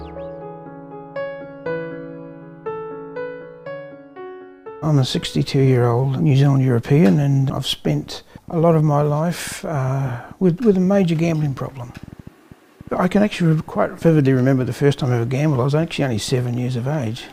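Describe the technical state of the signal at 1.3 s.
At 1.3 s the audio is intact, with no dropout, click, distortion or other fault.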